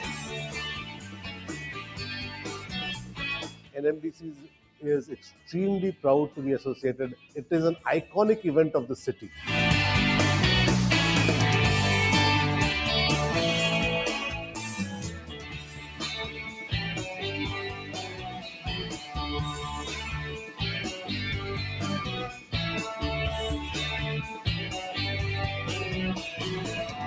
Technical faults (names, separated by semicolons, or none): noise suppressor applied to music or sounds; sound cut by the noise suppressor